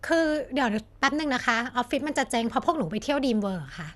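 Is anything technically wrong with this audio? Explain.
Yes, there's MP2 compression damage running through the whole speech clip, and it's plainly audible. Nothing gets through above about 12.1 kHz, so the top end sounds dull, and the remaining detail has a gurgling, grainy texture. That's likely MPEG Layer II coding short on bits, which fits a rate around 80 kbps. It drops its upper sub-bands entirely and coarsely quantises the ones it keeps, so those bands flicker in and out.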